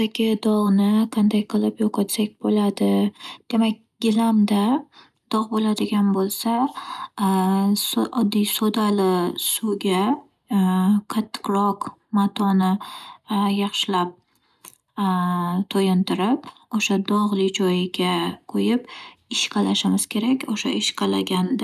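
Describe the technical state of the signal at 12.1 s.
Around 12.1 s the speech signal is intact, with no dropout, clipping, glitch or other fault to be heard at that point.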